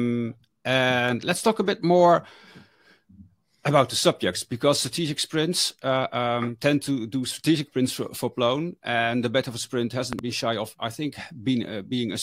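A loud pop arrives at 10.13 s, a pair of sharp pops running to 10.21 s that stand out roughly 15 dB above the surrounding audio, while the sound carries on uninterrupted underneath. The likely cause is a sudden electrical step or spike entering the signal path, from something like a plug being moved, a switch, a static discharge or a driver glitch, which the downstream circuitry turns into this brief double thump.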